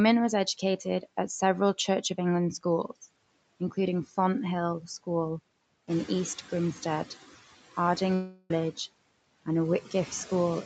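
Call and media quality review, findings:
Noise suppressor artifacts, whole clip. Per-band gain pulling steady noise down by about 21 dB, frame by frame; residual noise dips between phrases and swells under speech.

Noise suppressor catching up, 5.87–6.35 s. Room noise jumps by about 11 dB near 6 s, and the suppressor's noise estimate lags; the louder bed passes with only about 9 dB of reduction, then sinks over roughly 0.48 s as the estimate adapts.

Long network dropout, 8.14–8.51 s, likely a packet-loss gap on the Opus call path (audio band ending at 8 kHz). About 0.36 s of audio never arrives; concealment stretches the last sound into a fading buzz or hiss across the gap, no full silence, then speech resumes with that stretch missing.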